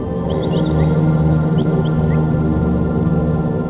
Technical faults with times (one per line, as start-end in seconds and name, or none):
1.62-1.66 short concealed packet loss